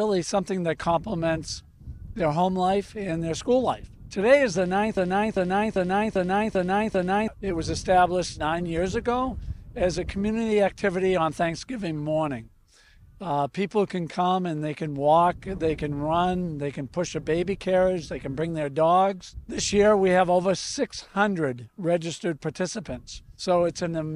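From 4.97 to 7.28 s the audio falls into a broken-record loop: a 395 ms fragment repeats six times back to back, likely from a stalled player or stream resending its last buffer. On a spectrogram or waveform, identical blocks tile the span, and the audio that belonged there is missing.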